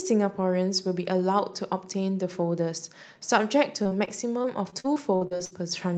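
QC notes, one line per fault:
3.83 to 5.53 s, repeated packet loss (robotic sound): thirteen short dropouts, the longest 59 ms. Each hole is bridged by stretching the preceding sound, so about a fifth of this span is synthetic fill, giving choppy speech with pieces missing.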